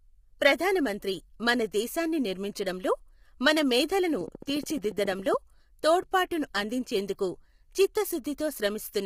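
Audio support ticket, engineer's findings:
Speech rough and grainy throughout, with noise between harmonics. Nothing above 15.6 kHz. Consistent with low-delay AAC compression, likely AAC-ELD: short frames resolve pitch harmonics poorly. Heavy damage fits a low bitrate near 24 kbps.

Train of clicks 4.21–5.35 s, after "దేశాన్ని నిర్మించడంలో మన మేధలను", ending before "తోడ్పాటును అందించేందుకు". Regular ticking, 14.2 per second, about fifteen clicks, peaks about 5 dB above the speech. Likely interference or a faulty connection injecting repeated pulses.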